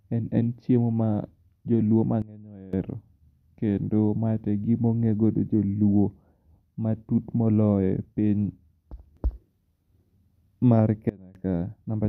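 Speech that abruptly drops by about 19 dB from 2.22 to 2.73 s and about 24 dB from 11.09 to 11.35 s, background included, is likely a sudden gain jump applied without a ramp.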